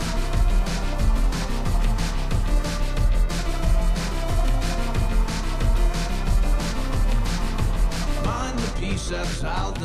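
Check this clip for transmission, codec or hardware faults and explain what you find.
No transmission, codec or hardware faults can be heard anywhere in the clip. Nothing in the audio calls for further explanation.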